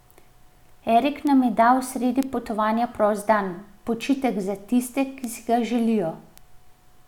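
It's a speech clip with five bit error spikes, isolated ticks at 1.27, 2.23, 4.01, 5.24 and 6.38 s. Each is one or two corrupted samples where a flipped bit throws the value off by a power of two before it snaps back, so you get a broadband click with no relation to the speech. Most peak at about -15 dBFS. The loudest, about -9 dBFS, lands between "nam je dal sredi" and "potovanja prost dan". Others follow "sredi potovanja prost dan" and "za tiste".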